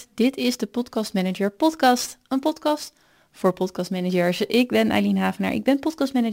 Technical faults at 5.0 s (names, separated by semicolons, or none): sample clock jitter